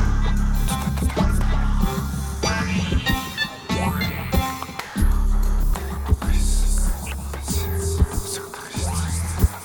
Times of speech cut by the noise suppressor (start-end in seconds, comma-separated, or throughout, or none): none